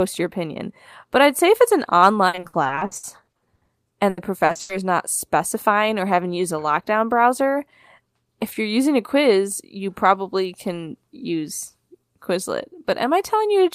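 From 2.27 to 4.71 s the speech breaks up with repeated packet loss (robotic sound): about twenty short holes, the longest 80 ms, are each patched by stretching the preceding sound, concealing roughly a third of that span. Unlike a single dropout, the rapid succession produces a choppy, robotic texture.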